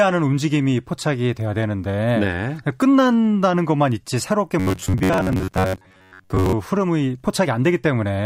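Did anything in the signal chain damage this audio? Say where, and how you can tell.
Yes. From 4.60 to 6.53 s the speech turns into a rigid, metallic buzz near 94 Hz that only loosely tracks the syllables: robotic sound from repeated short buffers, likely buffer underruns at the driver stage. Most of that stretch is replayed copies of a roughly 10.7 ms chunk, with the real audio skipped. On a waveform, identical 10.7 ms cycles repeat. On a spectrogram, a fixed comb of harmonics spaced about 94 Hz apart runs through the speech.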